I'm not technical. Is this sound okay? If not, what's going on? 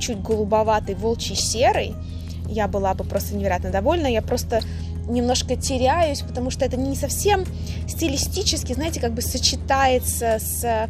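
No. The audio was likely squeezed hard by MP2 compression, as used on digital radio, which drops the upper frequencies and stores the rest roughly. Throughout, the sound is dull and muffled with a grainy, gurgling roughness.

DAB burbling comes from weak digital radio reception letting a small share of data errors slip through, so single frequency bands get short bursts of wrong sound. It's heard as short blips of noise at 1.35–1.47 s, 4.52–4.64 s and 8.17–8.39 s.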